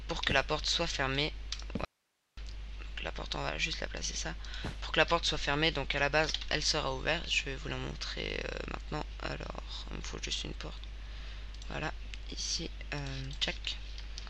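The audio has one audio dropout to a faint residue, from 1.85 to 2.37 s, lasting about 0.52 s. The signal cuts out abruptly in mid-flow and returns just as suddenly. Only hiss remains in the gap, roughly 45 dB below the normal level. A natural pause would not end this sharply, and a fade would taper instead of cutting. The live hiss separates it from a dropout to digital silence: the source was likely lost briefly while the path after the break stayed open.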